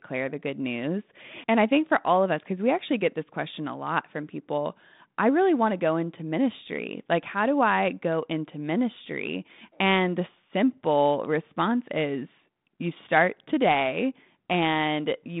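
Speech comes through a telephone-band G.726 ADPCM path at 32 kbit/s, spanning about 150 Hz to 3.7 kHz with nothing above 3.8 kHz and only light coding texture, and no technical fault can be heard in it.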